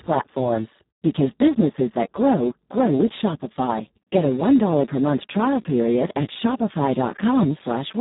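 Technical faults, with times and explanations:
Throughout: Speex codec damage, heavy. The speech has the hoarse, buzzy, somewhat robotic texture of a CELP coder running at a very low rate, which fits roughly 4 kbps. At that rate the excitation signal gets very few bits, so the fine structure of the voice is replaced by a coarse, noisy approximation. Nothing is present above about 3.8 kHz, leaving the speech band-limited and muffled.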